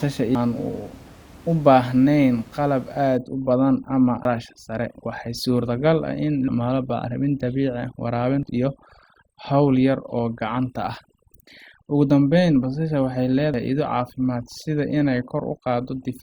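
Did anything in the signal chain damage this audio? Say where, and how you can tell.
Yes. Short chirps, squawks, clicks or holes break into the speech at 0.35, 4.25, 8.43 and 13.54 s. This is damaged data in a compressed stream, at the codec or storage stage. Corrupted or missing bytes left the decoder unable to read those frames. It lost sync and searched for the next frame header it could find, producing the blip.

From 3.17 s to the end, the pauses drop to near silence sprinkled with twinkling specks. That is overdone noise removal in the processing stage. The room noise sits about 25 dB below the speech. The suppressor was set far too hard for it, so it shuts individual frequency bands whenever they come close to its noise estimate. Quiet parts of the voice vanish along with the background.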